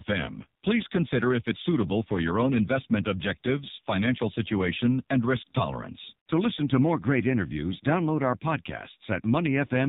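From start to finish the speech has gone through the AMR narrowband mobile codec, cut off at 4 kHz and heavily buzzy and synthetic, which fits a low mode near 6 kbps.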